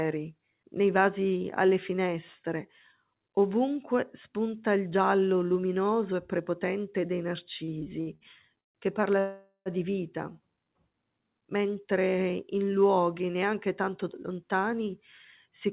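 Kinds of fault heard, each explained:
Repeated stalls (stutter): between "luminoso e prepotente dei" and "che parla di vita" (7.64 to 8.78 s), delivery falls behind five times, longest 142 ms. Each gap is filled by stretching the last sound, so the waveform shows smeared, repeated cycles and the spectrogram shows smeared horizontal bands.
Call audio freeze: after "che parla" at 9.20 s, the audio halts for about 0.46 s before "di vita" resumes intact. The last sound drones on, then drops to silence for 90 ms, likely from delayed packets draining the buffer, leaving a flat waveform and a blank spectrogram strip.
Jitter buffer speed-up: after "mentre in luoghi neanche", from 13.89 to 14.86 s, the speech runs about 5% faster at unchanged pitch. Roughly 50 ms is trimmed as tiny pitch-period slices, which shows up as spectrogram detail slightly compressed in time with no shift in harmonics.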